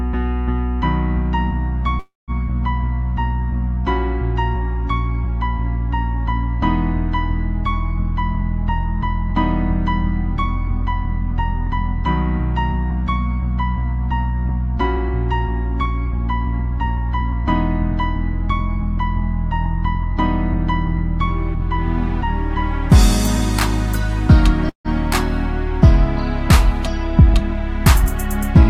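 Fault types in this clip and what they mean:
call audio freeze: At 1.99–2.31 s and 24.69–24.88 s, the last sound is stretched into a brief fading buzz or hiss, then silence of 180 ms and 110 ms. The sound then resumes where it stopped, likely because packets stalled and the jitter buffer ran dry. Nothing is lost, but the delay grows by the gap. A waveform shows a decaying tail into a flat line, and a spectrogram shows a smeared, fading band followed by an empty column.
jitter buffer speed-up: From 8.41–12.91 s, 14.10–22.10 s and 26.84 s to the end, the receiver trims tiny pitch-period pieces repeatedly to shed excess buffered delay. The audio plays at 102% speed, losing roughly a tenth, 0.15 and a twenty-fifth of a second, without any pitch change. A spectrogram shows harmonic spacing unchanged while events sit a little closer together. The waveform splices are nearly invisible.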